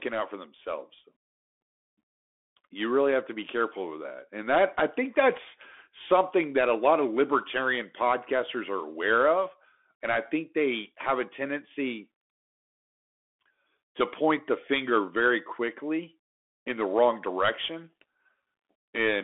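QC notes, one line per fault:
Throughout, Bluetooth CVSD headset codec: speech confined to roughly 250 Hz to 3.5 kHz, nothing above 3.8 kHz, with scratchy sibilants and granular hiss from one-bit slope tracking, unlike plain band-limiting.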